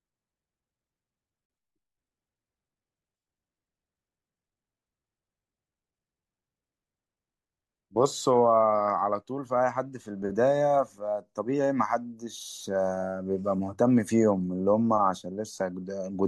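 A short, soft-edged gap breaks this speech clip at 1.46 to 1.50 s: the sound fades out and back in, leaving about 40 ms of silence. This is AAC frame loss with muting. Roughly four frames never arrived, so the decoder zeroed their spectrum and the overlapping windows smoothed the edges of the hole. Around it the speech carries a faint roughness, likely from low-delay AAC compression at 64 kbps, whose short frames resolve voice harmonics less cleanly.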